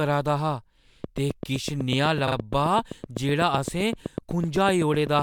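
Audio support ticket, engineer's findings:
Train of clicks, 1.04 to 5.20 s, starting just after "'रदा हा": likely external interference or a faulty connection or power supply injecting pulses. Regular ticking at 7.9 per second, around 30 clicks, peaks near 10 dB over the signal, audible in pauses too.

Repeated frames, 2.27 to 2.35 s and 3.58 s: compressed frames resent and decoded again. A 42.7 ms block plays twice more, a stutter adding 85.3 ms. An 8 ms block repeats once, adding 8 ms.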